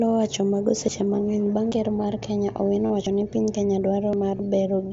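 Speech carried over a wideband Bluetooth headset link, band-limited at 8 kHz with light graininess on loud parts. Sudden jumps forward occur at 0.88, 1.72, 3.07 and 4.13 s. Each skips roughly 50 ms without any silence. The likely cause is a dropped buffer (overrun): the software fell behind, and the hardware overwrote audio before it was read. Two short buzzy patches sit at 2.86 to 2.90 s and 4.37 to 4.39 s, lasting 37.5 ms and 22.5 ms. These are concealed Bluetooth headset packet loss. The receiver filled the missing packets by repeating recent waveform. This gives a held, buzzy tone and a slight warble when real sound returns.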